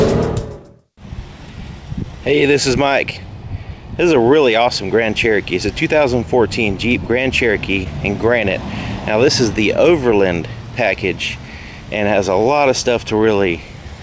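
A short concealed packet loss hit this call audio between 7.84 and 7.87 s: about 20 ms of packets arrived too late for the decoder, and the receiver invented roughly 11 ms of replacement by extending the preceding sound before crossfading back into the real signal. The result is a brief smear or wobble where a short detail can drop out. The call path's wideband codec cuts everything above 8 kHz, which fits G.722 at 64 kbps.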